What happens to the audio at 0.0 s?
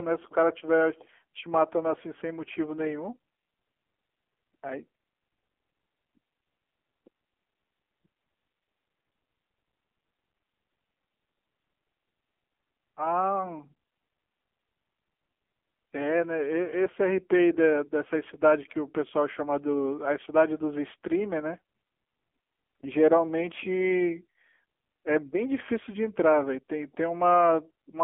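From 0.0 s the speech is already carrying AMR narrowband mobile codec damage, and it lasts the whole clip. Nothing passes above 3.5 kHz, and the band sits near 250 Hz to 3.4 kHz. The heavy buzzy, synthetic tone points to a low 6.7 kbps mode.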